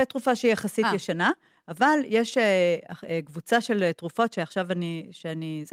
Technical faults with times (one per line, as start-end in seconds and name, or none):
none